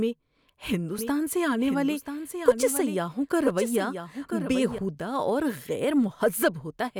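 From 0.99 s to 4.79 s the speech carries a doubled audio track. A second, full-band copy runs about a second behind the original, roughly 10 dB quieter. It has no reverb or room colour, so it sounds like a clean overlapping repeat rather than an echo. The copy cuts in abruptly just before "اور غیر" and cuts out just as abruptly at the end. The likely cause is a second capture of the same signal through a slower path.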